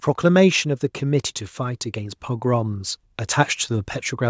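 From 0.63 to 2.97 s, automatic gain rising lifts the level by about 6 dB as the control decides the input is too quiet. Speech and background noise swell together over more than two seconds, a slow ramp rather than an abrupt step.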